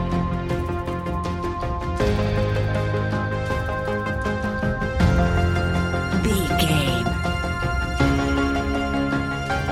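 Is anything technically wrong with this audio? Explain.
No, there is nothing technically wrong with this audio.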